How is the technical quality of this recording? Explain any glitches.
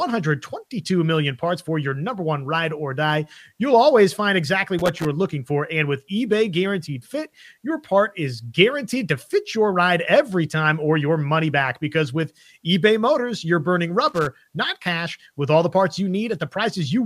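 The recording is marred by two bursts of loose connector crackle. The first runs from 4.79 to 5.06 s, after "always find exactly" and before "looking for". The second runs from 14.08 to 14.27 s, between "you're burning" and "not cash". A worn contact intermittently breaks the signal path, chopping the audio into an irregular, scratchy crackle.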